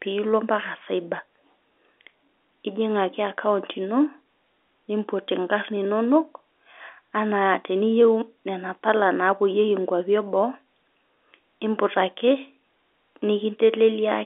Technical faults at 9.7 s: none

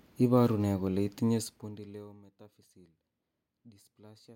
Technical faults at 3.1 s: none

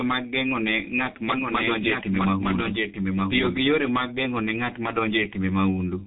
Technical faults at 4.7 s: G.723.1 codec

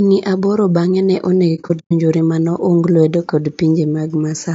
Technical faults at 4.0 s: low-delay AAC compression

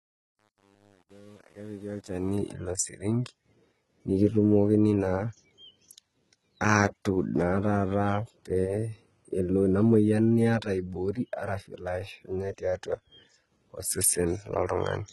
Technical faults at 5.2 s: HE-AAC compression

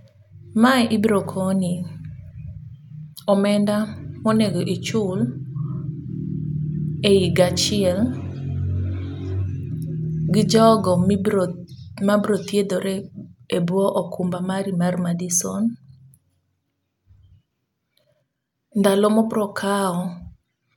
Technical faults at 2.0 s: none

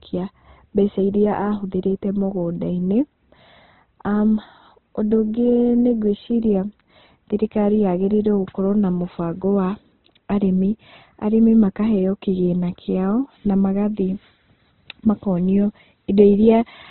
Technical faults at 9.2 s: Opus compression

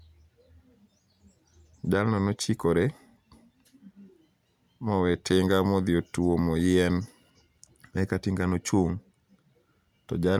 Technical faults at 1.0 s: none

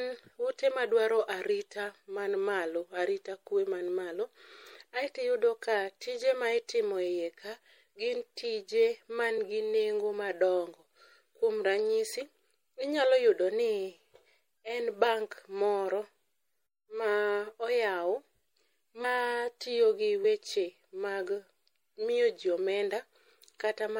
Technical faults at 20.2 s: MP3 compression; compressed frames skipped

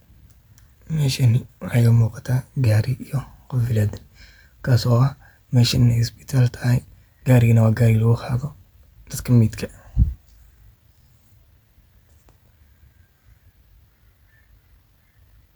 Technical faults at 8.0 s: none

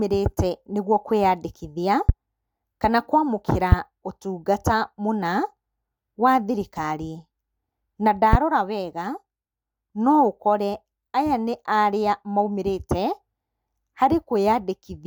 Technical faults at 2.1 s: loud pop

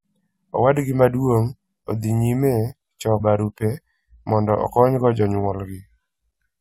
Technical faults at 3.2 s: damaged data in a compressed stream

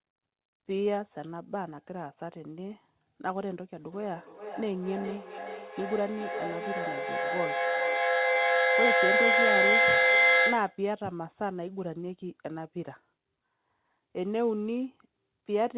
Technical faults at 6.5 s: feedback echo between two devices

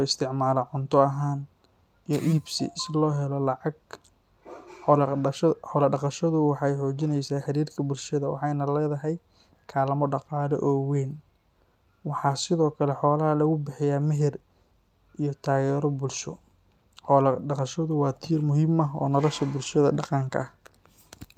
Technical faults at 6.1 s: none

